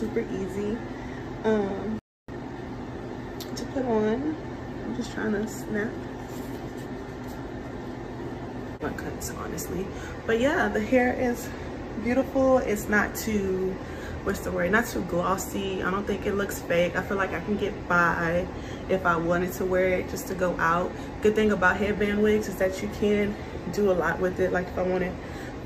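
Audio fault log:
1.99–2.28 s, playback stall: the sound just drops out for about 0.29 s, likely because the player ran dry or its thread got blocked, then it resumes.
2.28–2.56 s, time-compressed catch-up: right after, it's hurried along at roughly double speed but normal pitch, from small chunks being cut and cross-faded.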